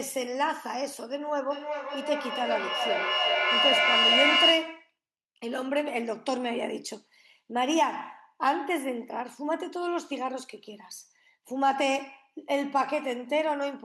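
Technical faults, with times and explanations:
1.5 to 4.93 s, feedback howl: a tone around 3 kHz swells up over the speech and peaks at about 4 dB louder than it, with the loop repeating roughly every 400 ms. That's a mic-to-speaker loop with more than unity gain, probably two devices on the same call in one room. Each trip round the loop adds level instead of losing it, and the resonance near 3 kHz wins out until the loop is broken.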